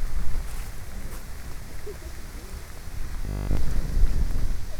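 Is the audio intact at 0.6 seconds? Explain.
Yes, the audio is intact at 0.6 seconds, with no dropout, click, distortion or other fault at that moment.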